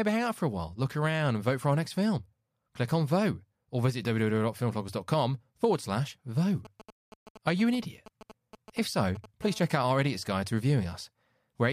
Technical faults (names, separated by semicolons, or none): GSM signalling bursts; GSM phone buzz